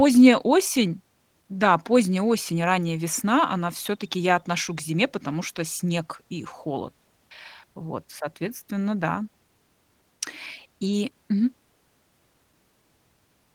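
There are no technical faults to describe at any point in this speech.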